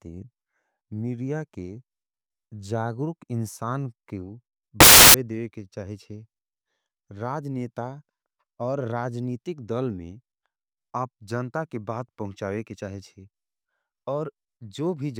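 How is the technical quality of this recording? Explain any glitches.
The recording has one glitch, a short burst where samples are built from the wrong bytes, from 4.80 to 5.14 s, between "जागुरुक इनसान क्यू" and "देवे के". For about a third of a second the bytes of each sample are assembled wrongly, so the rapidly fluctuating low bits land in the high positions. The speech is replaced by loud, harsh broadband noise. Unlike clipping or a dropout, it roars loudly rather than flattening or going silent.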